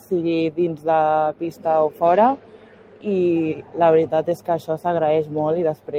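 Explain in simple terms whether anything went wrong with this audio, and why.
A speech-style noise suppressor was left running on this sound. It treats steady parts as noise and turns them down, so the level keeps pumping up and down.

The noise suppressor also cut the sound at 1.33 to 1.66, 2.36 to 3.06, 3.55 to 3.77, 4.37 to 4.69 and 5.75 to 5.94 s. Held or fading parts sink noticeably there.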